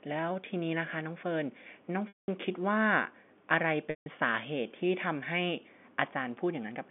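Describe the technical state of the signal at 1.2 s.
At 1.2 s the audio is intact, with no fault present, only the narrow telephone band of the G.711 line that runs through the whole clip.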